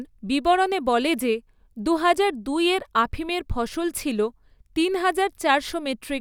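The speech recording shows no technical fault at any point, with the signal staying intact and consistent throughout.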